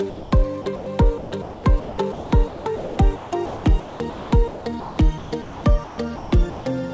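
From 0.10 to 0.32 s the sound gives way to steady noise for about 220 ms, with 80 ms of it lost. This is sound dropped by the voice detector: the sender likely mistook it for background and stopped sending, so comfort noise was played instead.

Between 0.62 and 0.86 s, 140 ms of sound is replaced by comfort noise. From 1.18 to 6.66 s, 3080 ms is replaced. Both stretches are sound chopped by the voice detector: the sender likely switched between sending and not sending repeatedly, leaving holes filled with synthetic noise.

At 6.94 s a further 1 ms is dropped the same way and filled with comfort noise. The call path's G.722 coding at 64 kbps leaves nothing above 8 kHz.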